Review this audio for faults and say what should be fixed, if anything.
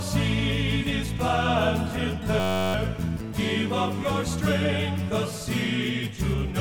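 From 2.40 to 2.74 s, a system hang loop repeats one 10.67 ms buffer, which fits a 512-sample buffer, 32 times. This makes a steady 93.8 Hz buzz and loses roughly a third of a second of audio. The waveform shows identical repeating cycles, and the spectrogram shows evenly spaced horizontal harmonic lines at multiples of 93.8 Hz. To prevent it, keep the audio thread from stalling and have the driver output silence rather than replaying the buffer when it underruns.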